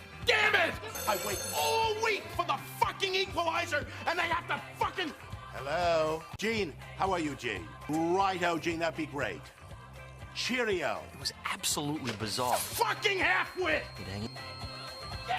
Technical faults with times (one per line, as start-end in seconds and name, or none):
12.27-15.39 feedback whistle